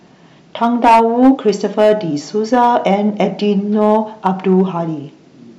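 From start to finish, the speech is driven about 7 dB harder than one stage in the chain can pass, so the tallest peaks are sliced off flat. This is hard clipping. Only a small share of the waveform, around two percent of samples, actually hits the ceiling. Those squared-off tops create harmonics high in the spectrum, heard as crackly, gritty bursts on the loudest syllables, while quieter stretches pass through clean.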